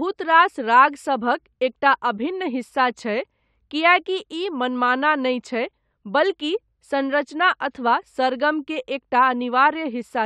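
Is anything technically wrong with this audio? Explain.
No, nothing technically wrong stood out on listening to this speech recording.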